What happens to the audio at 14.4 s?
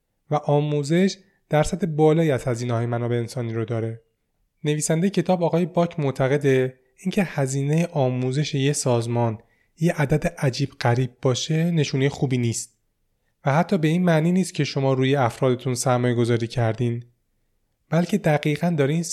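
Nothing goes wrong at 14.4 s; the speech carries on intact through that moment.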